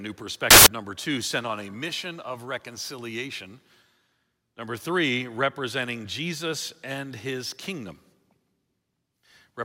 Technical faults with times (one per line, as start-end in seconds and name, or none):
0.51-0.66 samples built from the wrong bytes